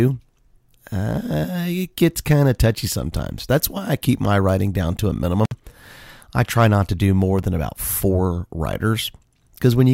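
Speech, with one intermittent contact fault at about 5.45 to 5.52 s, just after "writing down to a". The signal drops out for roughly 55 ms, with a crackle at the edges where the connection breaks and remakes, the signature of a loose plug or cable opening briefly. That edge crackle is what separates it from a digital dropout or packet loss, which cuts to clean silence or a smoothed gap with no contact noise.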